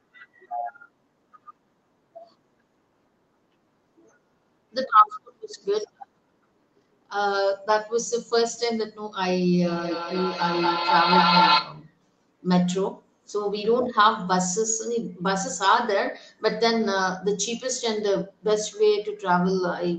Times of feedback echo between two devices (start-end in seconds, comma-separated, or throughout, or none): 9.67-11.89